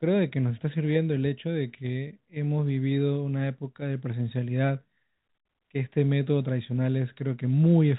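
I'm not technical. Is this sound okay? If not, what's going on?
Yes, nothing in this speech recording points to a fault. It has the narrower, slightly boxed-in sound of an ordinary landline call, because G.711 telephone coding keeps only the lower part of the sound, up to about 4 kHz, and that is normal for a phone line.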